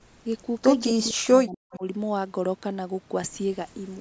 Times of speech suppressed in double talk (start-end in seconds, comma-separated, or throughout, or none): 0.99-1.84